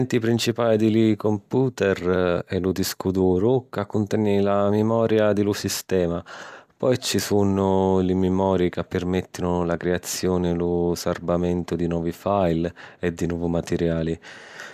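No technical faults are audible anywhere in this speech recording.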